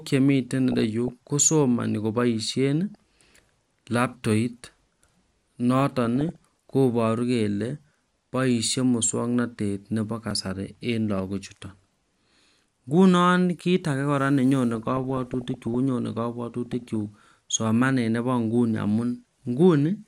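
DAB burbling appears from 0.72 to 1.10 s, 2.94 to 3.36 s and 6.05 to 6.38 s. Bit errors at a few tenths of a percent slip past error correction into the MP2 data, so wrong samples put short blips of noise into single sub-bands and wrong scale factors make sub-bands jump in level for up to a frame, over the speech.

At 10.31 s a repeated buffer occurs. A block of about 1.5 ms, which fits a 64-sample buffer, is replayed three extra times with hard joins because fresh audio arrived late. It is heard as a brief click-like buzz rather than a stutter.

DAB burbling returns from 14.75 to 15.75 s and from 16.66 to 16.96 s with the same sub-band artefacts.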